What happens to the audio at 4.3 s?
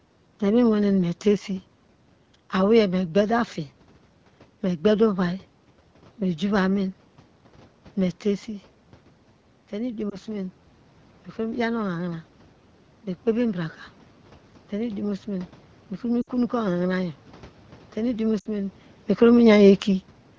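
Nothing goes wrong at 4.3 s; the speech there comes through intact, with no dropout, glitch or added distortion.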